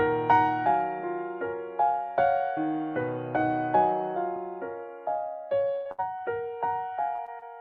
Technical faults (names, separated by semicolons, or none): repeated packet loss (robotic sound); short concealed packet loss